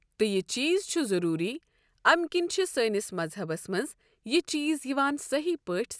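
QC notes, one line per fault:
No fault to note for this speech clip.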